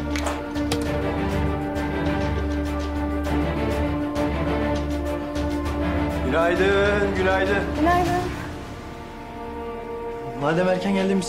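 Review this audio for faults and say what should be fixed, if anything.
Nothing here needs fixing; I didn't hear any faults on this one, so it can stay as it is.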